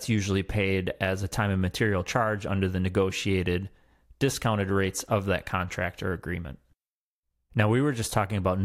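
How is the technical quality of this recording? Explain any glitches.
Nothing here sounds off to me: the speech comes through without any glitches, dropouts, or odd artefacts worth pointing out.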